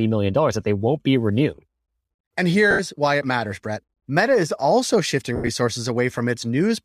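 Lost LE Audio frames occur at 2.71–2.80 s and 5.36–5.49 s. The decoder fills each gap by repeating the last spectrum with scrambled signs, so the sound smears into noise. The first gap is about 80 ms. The second is 90 ms scattered over 120 ms, with its longest run around 70 ms, which fits the 10 ms frames of what is likely LC3.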